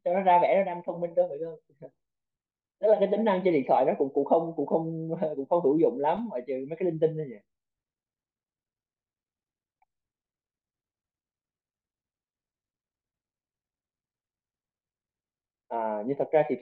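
No technical faults are audible anywhere in this speech recording.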